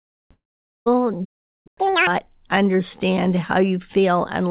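At 0.32 s the sound breaks off, and what follows sounds like a long network dropout. The last bit of speech smears into a fading buzz, then goes quiet until 0.88 s. About half a second of speech is simply gone when it resumes.

From 1.25 s to 1.67 s the audio just stops mid-flow for about 0.4 s, then picks up again. That's a playback stall, most likely the player running dry on data or getting its thread blocked.

Straight after, from 1.67 s to 2.07 s, you get catch-up at higher speed. The player burns through its backlog at double speed, so the speech jumps up in pitch by roughly ten semitones, chipmunk-style. Throughout, the call path's G.711 coding leaves nothing above 4 kHz.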